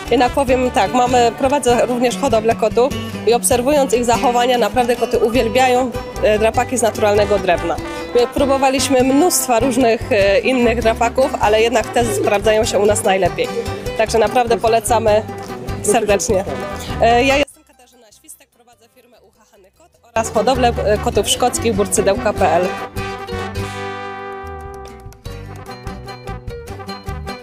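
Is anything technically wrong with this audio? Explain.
Yes. From 17.43 to 20.16 s the sound collapses to a faint residue about 32 dB down, likely from one channel inverted, cancelling common content in mono.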